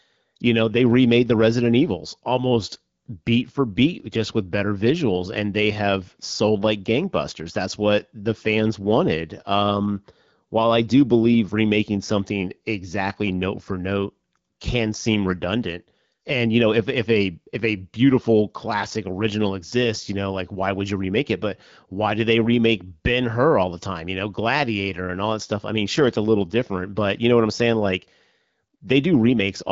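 No technical faults can be heard anywhere in this audio.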